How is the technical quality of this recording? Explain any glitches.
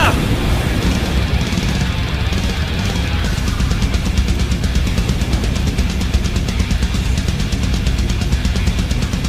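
No glitches or faults heard.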